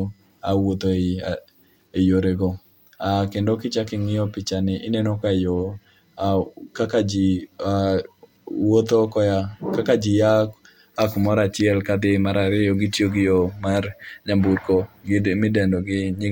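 No technical faults can be heard anywhere in the recording. Nothing in the audio calls for a timestamp or an explanation.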